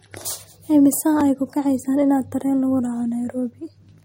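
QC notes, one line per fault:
Throughout, likely MP3 compression: the speech carries plainly audible codec damage, with a watery, swirling quality where weak frequency components drop in and out from frame to frame, and sibilants take on a metallic chirp. On a spectrogram, energy stops flat at about 15.9 kHz, and the upper bands show speckled holes that flicker over time. The amount of damage fits a low rate of around 48 kbps, where the encoder runs short of bits and discards detail.
1.21 s, block of digital silence: a gap of about 1.8 ms where the signal drops straight to silence and returns with no fade. Because it is so short, it comes across as a tick or dip rather than an audible hole. On the waveform it shows as a tiny flat line near zero between two discontinuities. On a spectrogram it is a thin vertical broadband stripe.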